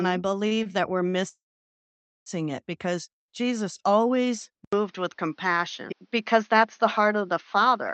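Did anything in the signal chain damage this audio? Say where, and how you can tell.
Yes. Between 0.47 and 1.15 s the sound briefly hangs and smears at 0.47–0.53, 0.55–0.73, 0.63–0.67 and 1.10–1.15 s. These are short stalls from late packets at the network and jitter-buffer stage. Each gap was filled by stretching the last sound for about 18 to 37 ms, and nothing was lost.

From 1.29 to 2.28 s the audio stops for nearly a second, mostly dead silence of about 0.88 s, then resumes exactly where it left off. This is a call audio freeze, likely caused by packets held up in the network until the jitter buffer ran dry.

At 4.65 s there is a dropout of about 80 ms. The rest of the clip then sounds duller and narrower, with nothing above 6.5 kHz, which is below the call codec's own 8 kHz band. It has a new noise floor roughly 45 dB down, with no real level change. This is likely the input switched to a poorer device at the capture stage.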